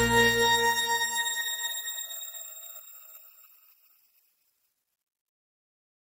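No faults to report anywhere in the audio.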